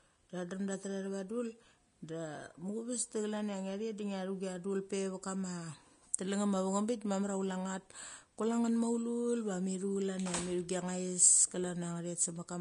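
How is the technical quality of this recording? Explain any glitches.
The recording carries plainly audible Vorbis compression throughout the speech. Nothing survives above 10.5 kHz, and the remaining treble turns hissy and grainy, with blurred consonant attacks. This is likely low-bitrate Vorbis, around 33 kbps, where coarse quantisation replaces fine detail with noise rather than leaving the treble dull, as a plain low-pass would.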